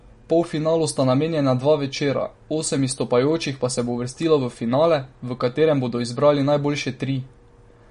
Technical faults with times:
0.00-7.91 MP3 compression

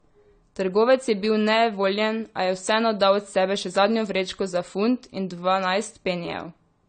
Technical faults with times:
0.00-6.88 low-bitrate audio saved at a high bitrate

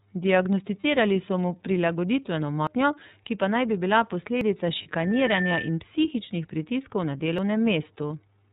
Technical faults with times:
0.00-8.52 iLBC codec
0.80-0.83 lost iLBC frames
2.67 dropped buffer (overrun)
4.41 dropped buffer (overrun)
4.83-4.87 lost iLBC frames
7.38 dropped buffer (overrun)
8.07-8.10 lost iLBC frames

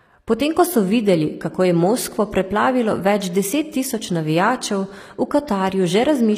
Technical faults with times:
0.00-6.38 HE-AAC compression

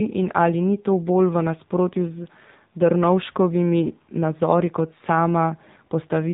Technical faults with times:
0.00-6.34 AMR narrowband mobile codec

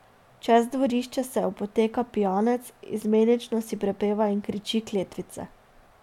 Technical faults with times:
none

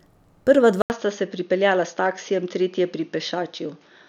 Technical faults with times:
0.82-4.09 input switched to a poorer device

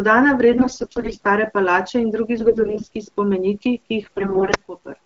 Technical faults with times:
0.52-1.26 AMR bit errors
2.37-2.96 AMR bit errors
4.02-4.56 AMR bit errors

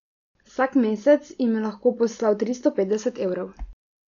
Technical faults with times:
0.00-4.08 Dolby Digital compression

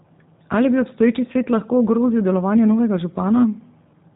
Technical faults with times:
0.00-4.15 G.729 codec

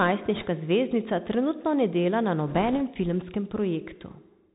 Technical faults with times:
0.00-4.54 Bluetooth CVSD headset codec
0.35-0.45 bit errors on a Bluetooth voice link
2.48-2.81 bit errors on a Bluetooth voice link

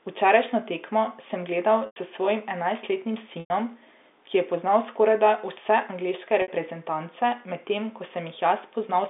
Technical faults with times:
1.86-1.96 packet loss with pitch repetition
3.40-3.50 packet loss with pitch repetition
6.42-6.48 packet loss with pitch repetition

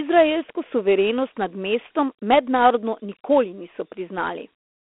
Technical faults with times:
0.00-4.99 Dialogic VOX ADPCM

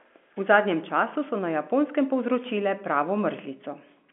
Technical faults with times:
none

